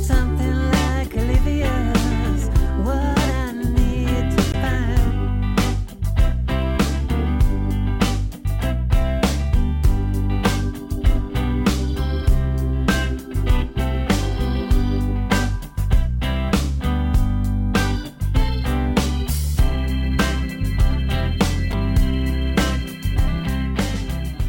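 Sample clock jitter runs throughout. The converter's clock wavers by around 5 µs, smearing steep waveform edges. A roughness about 35 dB down rises with loud, bright passages.

Damaged data in a compressed stream hits at 4.51 to 4.55 s and 21.70 to 21.74 s. The decoder loses sync, producing a brief chirp, squawk, click or short hole.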